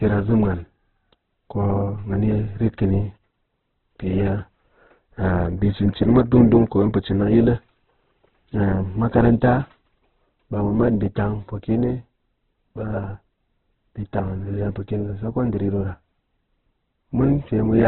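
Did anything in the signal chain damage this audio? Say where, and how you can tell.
Yes: likely Opus compression at the codec stage, throughout. Noise-filled bands make the speech grainy, and the spectrogram is empty above 4 kHz, which fits roughly 8 kbps.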